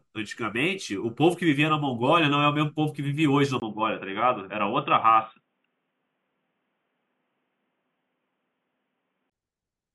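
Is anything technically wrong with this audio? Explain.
Yes. At 3.6 s, after a brief 20 ms gap, the speech turns dull and boxy until 9.32 s, with nothing above 3.7 kHz and faint new background noise at a similar overall level, likely an input switched to a poorer device.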